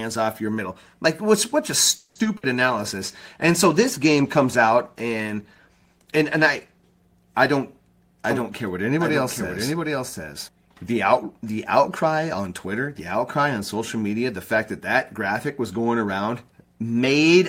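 At 1.95 s the speech stalls for about 200 ms, ending at 2.17 s. The last sound is drawn out as a buzz or hiss that fades, then the talker resumes exactly where they left off. This is a call audio freeze, likely from packets held up in transit that let the jitter buffer run dry. Nothing is lost, but the whole call now sits about 200 ms later.

Right after, from 2.23 to 2.27 s, comes a short concealed packet loss. About 20 ms of audio never reached the decoder, and the receiver bridged it by extending the preceding sound and crossfading back. The result is a slight smear or wobble rather than an audible gap.

From 2.37 to 2.45 s a burst of packet loss removes about 60 ms of speech. Concealment holds the previous sound and lets it decay as a brief fading buzz or hiss. When real audio returns it has jumped ahead, and the missing stretch is simply gone.

A call bitrate drop begins at 2.57 s and lasts to 7.07 s. 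The encoder rate falls from 32 to 16 kbps and stays at the low rate for about 4.4 s. Coarser Opus coding makes the speech sound rougher and more watery, with reduced high-frequency detail, until the rate recovers.

Between 8.30 and 10.48 s there is a doubled audio track. A second full-band copy of the speech trails the original by roughly 0.7 s at about 5 dB lower. It has no reverberant tail or room colour, and it switches in and out abruptly, consistent with a second, slower capture path.

Two jitter buffer speed-ups follow. The first runs from 11.99 to 12.89 s at 112% speed and removes around 100 ms. The second runs from 13.37 to 14.17 s at 109% and removes about 70 ms. In both, the receiver trims many short pitch-period slices to shrink an overfull buffer, so the speech sounds hurried while its pitch stays unchanged.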